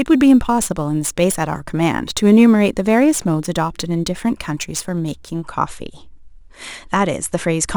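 From the start to 5.44 s the speech carries crude rate conversion: samples were picked by nearest neighbour without filtering, which fits a 48 kHz to 44.1 kHz change. It adds a gritty, inharmonic fizz roughly 25 dB down that tracks loud, bright syllables, unlike steady quantisation hiss.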